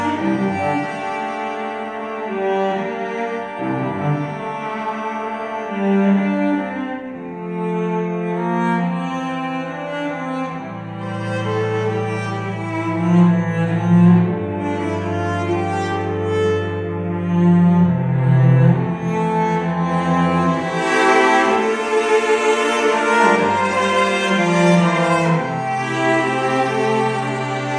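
No technical fault can be heard anywhere in this audio. Nothing in the sound points to a problem in how it was captured, processed or delivered.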